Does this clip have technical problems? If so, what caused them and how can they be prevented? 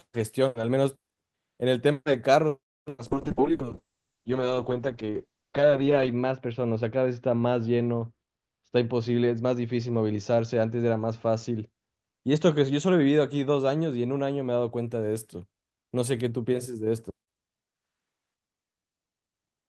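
Yes. From 3.1 to 14.77 s the speech turns muffled and rough, worst for about 3 s. This is a call bitrate drop: the encoder was starved of bits, which fits a fall from 32 to 7 kbps, so it coded more coarsely and cut the top end from 20 kHz to 8 kHz. More stable network capacity and a higher minimum encoder bitrate would prevent it.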